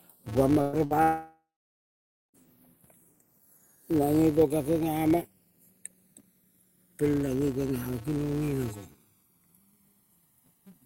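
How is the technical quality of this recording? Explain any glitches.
Quality is poor: the recording has two continuous faults and a cluster of gaps in its first two and a half seconds.

Channels drifting apart runs through the whole clip. The left and right channels appear to be clocked by separate devices, so their relative delay creeps along at roughly 100 parts per million, ending at around a millisecond of offset. When the channels are summed, the resulting comb notches slide slowly across the spectrum. The result is a slowly sweeping flanging on the speech.

A filter restarted on every block is also present from start to finish. At each block boundary the filter discards its state and starts again from zero, putting a small transient at the head of every block. These transients repeat at 200 Hz, which points to blocks about 5 ms long. They merge into a buzz at that rate, getting louder and softer with the speech level.

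There are two bursts of packet loss. The first runs from 0.61 s to 0.76 s. About 120 ms of audio never arrived, and the receiver covered roughly 114 ms of that by extending the last sound and fading it. The second runs from 0.85 s to 0.93 s, with 60 ms missing and about 56 ms concealed. Each one is heard as a brief held buzz or decaying hiss. The speech then jumps ahead, with the section in between gone.

From 1.02 s to 2.37 s, about 1.32 s of audio is missing, most likely from a long network dropout. Concealment first stretches the last sound into a fading tail. After that, roughly 0.89 s of silence remains before the speech resumes further on, without the lost section.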